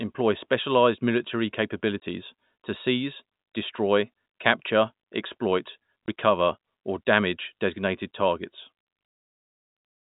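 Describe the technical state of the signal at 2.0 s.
At 2.00 to 2.02 s, just after "specialized military", there is packet loss filled with silence: a 20 ms hole, which fits one lost packet, replaced by silence. Its edges are hard, unlike concealed loss, which smears or repeats sound instead of leaving a gap.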